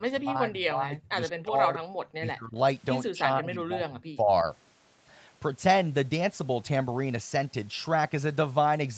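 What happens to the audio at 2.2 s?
From 2.19 to 2.57 s the speech dips sharply, by roughly 25 dB at its deepest, and partly drops out. This is likely speech suppressed in double talk: with both sides talking at once, the echo canceller mistook the talker for loudspeaker echo and turned everything down.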